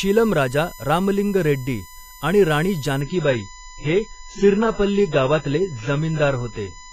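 A USB whine runs throughout: a fixed 1 kHz tone roughly 20 dB below the speech, drawn as a steady horizontal line on a spectrogram from bus-frame current leaking into the audio. From 3.01 s to the end, an adaptive stream at a lower bitrate takes over. The treble is abruptly cut off above 7.6 kHz, leaving a flat spectrogram ceiling with no gap. The resulting duller, more smeared sound fits a drop from 96 to 16 kbit/s AAC.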